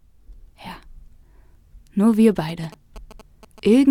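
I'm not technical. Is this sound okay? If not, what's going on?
No. From 2.49 s to the end, a quiet galloping ticking buzz appears: GSM signalling bursts. A nearby 2G phone's radio pulses, about 217 per second, are leaking into the audio circuit.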